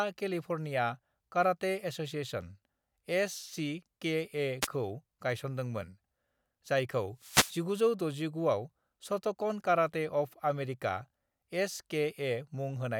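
Wireless microphone noise hits occur at 4.61 to 4.67 s and again at 7.18 to 7.60 s. The analogue FM radio link fades when reflected paths cancel the direct signal at the receiver, so receiver noise rises over the voice. The first hit is a brief swish of about 60 ms. The second lasts about 0.4 s, a longer burst of static.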